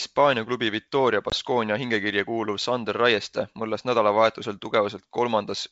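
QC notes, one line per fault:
1.30–1.35 s, packet loss on an ADPCM call: abrupt 20 ms silent gap, about one packet; speech resumes slightly distorted while the decoder's predictor resynchronises.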